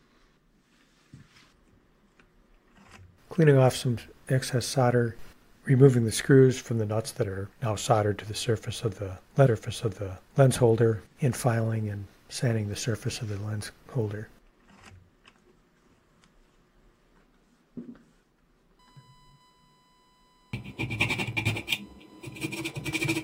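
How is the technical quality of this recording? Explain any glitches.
Two glitches stand out. From 9.45 to 10.45 s, about one second of audio plays again with a small blip at the jump back: a stream segment repeated because the player fetched or queued the same chunk twice. From 18.79 s to the end, a faint steady 1 kHz tone sits roughly 40 dB below the programme. This is USB whine, where the bus's 1 ms frame activity leaks in through power or ground.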